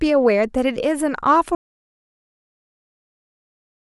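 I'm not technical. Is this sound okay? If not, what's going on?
No. The speech plays normally until about 1.55 seconds, then cuts off abruptly and stays completely silent until the end of the clip. It's total, dead silence, without even the faint background hiss of a room. This is an audio dropout to silence. The likely cause is that the recording lost its input, for example through a disconnected microphone, a dropped connection or an accidental mute, while the recorder kept running. Anything said after the cut wasn't captured.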